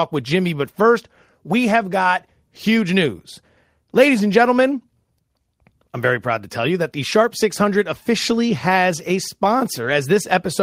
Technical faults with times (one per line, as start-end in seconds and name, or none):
9.81-9.91 lost packet rebuilt from error correction